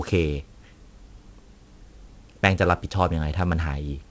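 From start to finish the speech carries aliasing: the audio was brought down to a lower rate, which fits a 16 kHz target, without an anti-alias filter, so content above 8 kHz folds back beneath that edge at unrelated pitches, roughly 30 dB under the signal. Sibilants sound gritty and metallic, and energy runs hard right up to 8 kHz. That sets it apart from a plain low-pass, which would leave the top dull rather than harsh.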